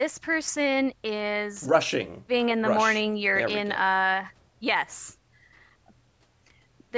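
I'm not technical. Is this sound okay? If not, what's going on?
Yes, nothing here is wrong.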